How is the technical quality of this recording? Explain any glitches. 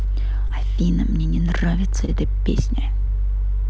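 The speech carries call-codec coloration with nothing above 8 kHz, consistent with a wideband codec such as G.722, plus two brief dropouts. At 0.48–0.51 s and 2.05–2.10 s, short concealed packet loss: roughly 20 ms of audio arrived too late, and the receiver extrapolated the preceding sound, heard as a brief smear or wobble.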